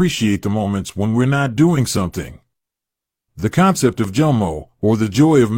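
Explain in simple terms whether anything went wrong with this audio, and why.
Around 4.04 to 4.08 s the speech jumps with a tiny skip: an overlap between stream segments made the player drop about 40 ms of sound.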